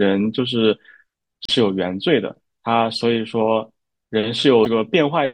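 Watery, swirly speech with dulled treble and smeared consonants runs through the whole clip, the sound of MP3 compression. The encoder is likely starving for bits, which fits a bitrate around 64 kbps, so it cuts the top end and lets weak frequency lines flicker on and off between frames. Brief glitches at 1.43 to 1.50 s and 4.63 to 4.67 s come from damaged data in the compressed stream: the decoder misreads corrupted frames, loses sync and skips ahead to the next valid frame header.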